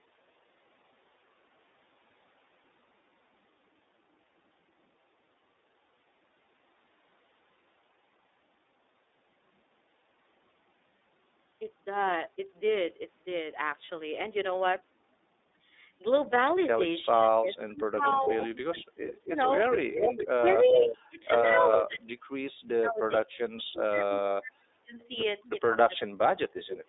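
The whole clip sounds boxy and slightly rough and synthetic, with everything confined to roughly 300 Hz to 3.7 kHz. That is the iLBC codec, a narrowband VoIP coder that codes each frame's excitation independently of the previous one. The damage is plainly audible, and the character fits iLBC's 30 ms frame mode at around 13.33 kbps. The band limit comes from the codec and the line, not from the call microphone processing.

At 13.85 s and again at 18.24 s, there is a brief held, faintly buzzy smear of about 30 ms before the sound snaps back to normal. These are lost iLBC frames. Each time, a single packet went missing, and the decoder filled the gap by repeating the last pitch cycle blended with noise. Because every frame decodes on its own, the sound recovers immediately after each gap.

From 17.13 s onward, the level repeatedly ducks, thins or breaks up in pieces. This happens at 17.13–18.51 s, 19.24–19.35 s, 20.26–21.26 s, 21.87–25.01 s, 25.56–26.02 s and 26.61 s to the end. 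The deepest dip is about 40 dB, during the 21.87–25.01 s stretch, and the others fall by about 20 to 35 dB. This is speech suppressed in double talk. The likely cause is that the echo canceller could not separate the near talker from loudspeaker echo while both sides were speaking, so it turned both down.

From 18.02 s to 20.97 s, and briefly at 21.71–21.84 s, a delayed copy of the speech trails the original by about 416 ms, at roughly the same loudness. This is an echo leak. The likely cause is that a loudspeaker on one end was picked up by its microphone, and that end's echo canceller failed to remove it, so the copy was sent back down the line.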